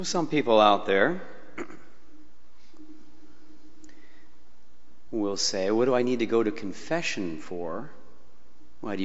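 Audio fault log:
No faults can be heard anywhere in this clip.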